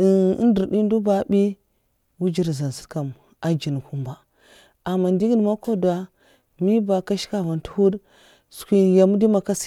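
Listening to this speech recording, nothing stood out as technically wrong.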